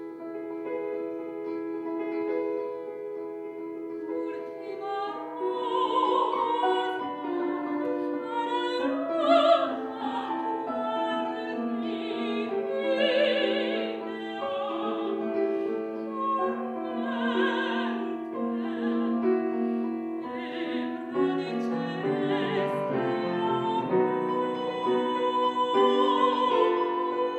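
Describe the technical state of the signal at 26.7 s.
At 26.7 s the signal is intact, with no technical fault present.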